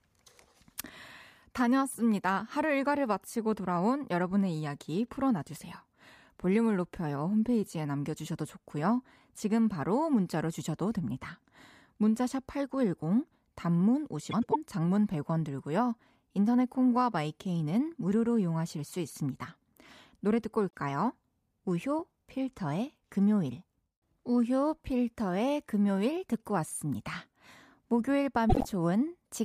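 Frames out of order: neighbouring blocks of frames were decoded swapped at 14.31–14.56 s, 20.69–20.76 s and 28.49–28.66 s. Each stretch plays with its halves exchanged, a garbled flutter.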